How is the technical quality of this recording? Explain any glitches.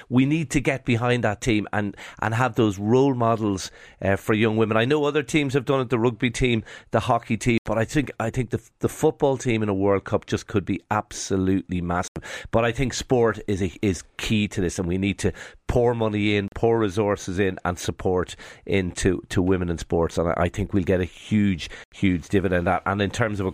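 The speech is interrupted by four short silent gaps, each most likely a Bluetooth dropout. They fall at 7.58 to 7.66 s after "rugby team the hockey" and before "but I think I", at 12.08 to 12.16 s after "just could be absolutely", at 16.48 to 16.52 s, and at 21.84 to 21.92 s after "get a huge". Three last about 81 ms and one about 41 ms. In each, audio arrived too late for the headphones and was discarded, so the output cuts to silence. The speech then resumes as though it had kept playing, with a chunk simply missing. Unlike a stutter or buffer underrun, nothing repeats or slows.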